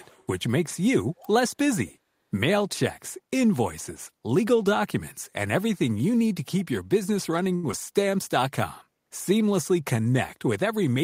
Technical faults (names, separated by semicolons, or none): echo leak; short stall from a late packet; short concealed packet loss; jitter buffer slow-down